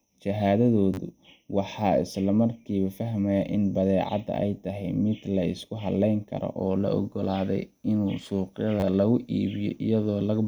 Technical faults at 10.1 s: none

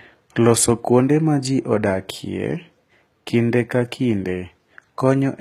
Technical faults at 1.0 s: HE-AAC compression

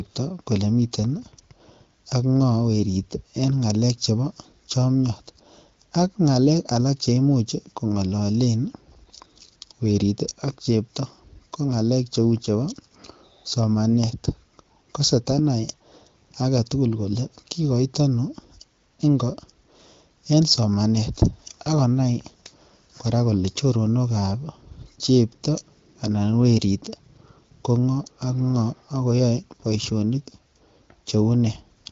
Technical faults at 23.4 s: none

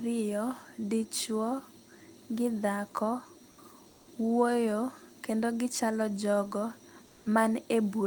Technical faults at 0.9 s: none

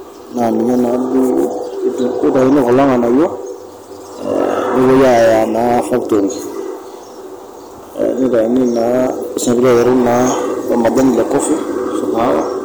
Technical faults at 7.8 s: hard clipping

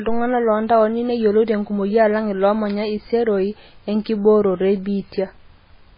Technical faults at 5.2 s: MP3 compression

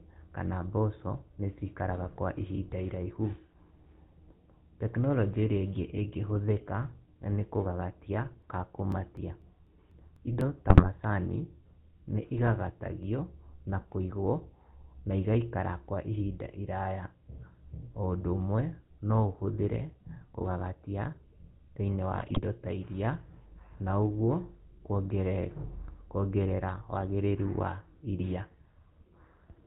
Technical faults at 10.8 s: GSM full-rate codec; GSM bit errors

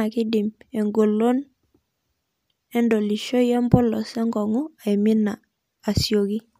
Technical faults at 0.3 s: none

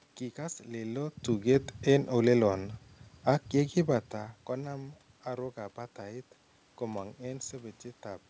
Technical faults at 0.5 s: none

